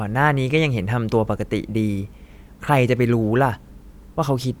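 No technical faults are audible in this speech.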